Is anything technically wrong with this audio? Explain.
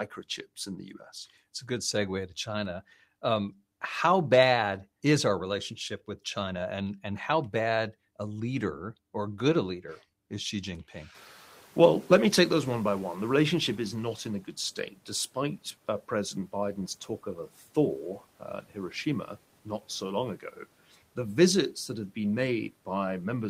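Yes, there are two noise suppressor faults.

From 0.66 to 1.01 s, the suppressor produces speech cut by the noise suppressor. It mistakes parts of the speech for background and turns them down by up to about 7 dB, across about a fifth of a second in total. Those parts sound swallowed. A spectrogram shows thinned, faded speech energy, and the waveform shows shrunken envelopes.

From 11.14 to 14.4 s, the noise suppressor is catching up. Room noise jumps by about 22 dB near 11 s, and the suppressor's noise estimate lags. The noise comes through with less reduction at first, then sinks by about 9 dB over 3.26 s. A spectrogram shows a noise floor that brightens abruptly and then fades gradually.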